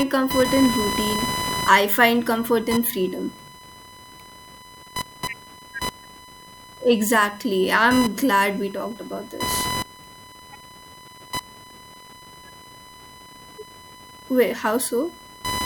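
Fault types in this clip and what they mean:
Computer activity noise: computer load currents disturb the shared ground. Here a buzz pulsing around 1 kHz runs throughout, about 10 dB below the speech.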